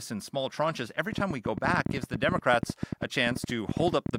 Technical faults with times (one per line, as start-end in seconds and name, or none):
1.13-4.16 train of clicks